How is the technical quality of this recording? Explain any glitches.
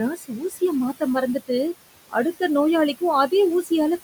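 The recording has two audible processing faults, both from a noise suppressor acting on speech over room noise sitting about 13 dB below the voice.

Noise suppressor artifacts run throughout: the background is pulled down by about 20 dB frame by frame, so the noise sinks between the words and rises under them.

Speech cut by the noise suppressor occurs from 0.11 to 0.62 s: quiet speech was mistaken for noise and lowered by up to about 14 dB, leaving roughly a third of a second sounding swallowed and faint.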